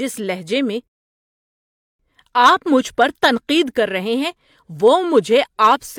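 At 0.88 s, after "لہجے میں", a rebuffering stall: the player ran out of data, silencing the speech until 2.00 s before it resumes intact.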